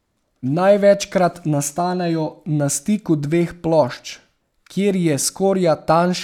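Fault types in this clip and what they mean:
No faults found; nothing in the speech signal points to a recording, transmission or playback problem.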